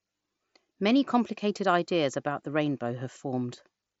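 Speech, and nothing is technically wrong with it.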